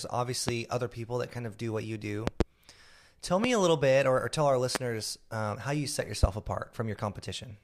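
A sudden voltage step or pulse, likely from a plug, switch, static discharge or driver glitch, enters the signal path as a loud pop at 0.49–0.51, 2.27–2.43 (two pops), 3.44–3.47, 4.75–4.78 and 6.23–6.26 s. Each pop is around 20 dB above the speech, which continues underneath.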